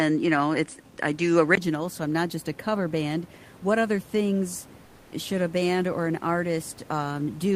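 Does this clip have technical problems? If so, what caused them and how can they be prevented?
Yes. From 0 to 1.57 s the speech has a narrower, duller tone with nothing above 10.5 kHz. A 20 ms gap then marks the return to fuller sound, with a small jump in level. This is likely an input switched to a poorer device. Locking the recording input to one microphone prevents it.

From 4.85 to 5.11 s, the real room noise, normally about 26 dB below the speech, gives way for 260 ms to a steady, featureless hiss about 3 dB quieter. This is likely comfort noise in place of the background from discontinuous transmission, such as Opus DTX. Disabling DTX on the sending side prevents it.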